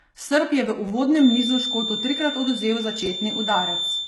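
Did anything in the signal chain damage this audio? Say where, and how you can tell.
Yes. The spectrum stops dead near 11.8 kHz, and the treble beneath that sounds synthetic and coarse, with heavy codec damage throughout. That points to a low-bitrate codec stage, likely HE-AAC compression, which rebuilds the upper band from copied lower bands instead of transmitting it.

At the driver or buffer stage, a repeated buffer appears at 0.88 to 0.91 s, just after "je v", and again at 3.06 to 3.08 s. A tiny slice of audio replays with hard joins, fitting a buffer of about 10 ms, so each event sounds like a short buzzy stutter rather than a gap.

From 1.13 s to the end, starting just after "je v", a 3.6 kHz feedback whistle that slowly swells and fades sits about 5 dB below the signal. This is likely a loudspeaker-to-microphone loop in the call path held just short of runaway, which leaves a thin, persistent tone behind everything.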